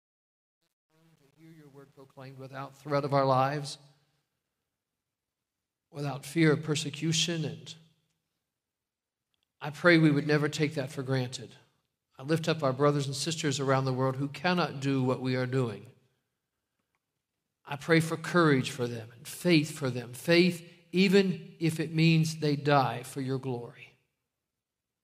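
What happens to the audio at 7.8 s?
Nothing goes wrong at 7.8 s; the audio is intact and plays through that moment cleanly, with no dropout, click or distortion.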